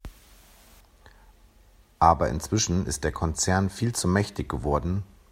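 Nothing in this speech recording stands out as a technical fault; it simply carries on the whole way without anything going wrong that a listener would notice.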